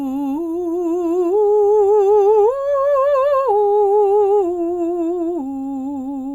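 No technical faults are audible anywhere in the music.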